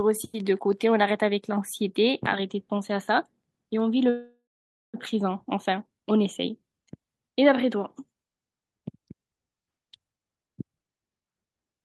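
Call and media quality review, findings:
Sound stalls 4.09–4.96 s: brief fading buzz, then about 0.52 s silence, resumes intact. Call audio freeze, likely jitter buffer underrun from delayed packets; gap inserted, nothing lost.

Hurried delivery 10.12–11.82 s, pitch unchanged, about 148% speed. Jitter buffer speed-up: receiver trimming repeated pitch-period slices, roughly 0.7 s, to drain excess buffered delay.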